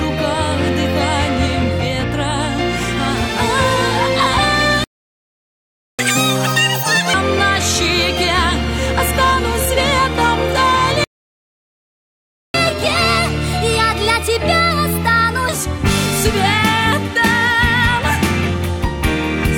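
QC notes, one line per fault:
4.84–5.99 s: playback stall. The audio cuts out mid-flow for about 1.15 s and then resumes. This is likely an output buffer running dry or a blocked playback thread, with nothing sent to the device until data arrived again.
5.99–7.14 s: catch-up at higher speed. The resumed audio plays at 2.0x speed, with its pitch raised by nearly an octave because resampling shifts speed and pitch together. Over 1.15 s this wins back about the time lost in the stall, then playback drops to normal rate.
11.04–12.54 s: playback stall. A second silent gap of about 1.5 s interrupts the sound, and playback then continues. The likely cause is again a data underrun or a stalled player thread.
12.54–15.54 s: catch-up at higher speed. The player runs at 1.15x for 3 s to work through its backlog. The pitch is raised by about a whole tone, which is subtler than the first catch-up but still audible as a slightly rushed, sharp stretch before the rate returns to normal.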